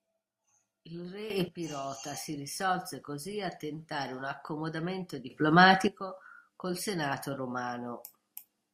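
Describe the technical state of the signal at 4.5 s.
At 4.5 s the speech signal is intact, with no audible fault at that moment.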